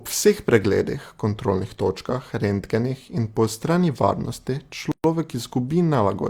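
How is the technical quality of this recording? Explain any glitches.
The recording has one glitch: a gap at a join of encoded pieces. At 4.92 s the speech drops into silence for about 125 ms, until 5.04 s. The pieces were encoded separately and joined untrimmed. Encoder delay and end padding left silence. Its edges are smeared by the codec. Speech resumes where it stopped.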